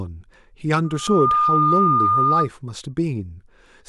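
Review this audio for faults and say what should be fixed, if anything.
A loudspeaker feedback squeal runs from 0.84 to 2.49 s: a 1.2 kHz tone swells over roughly half a second and settles a few decibels above the speech, as the microphone re-amplifies its own loudspeaker output at that frequency. Preventing it means lowering gain, repositioning the microphone, or notching 1.2 kHz.

A CD skip occurs at 1.07 s, heard as a tick with a very brief mute, after which playback resumes from a different point on the disc because the laser jumped tracks. Cleaning the disc and isolating the player from knocks would prevent it.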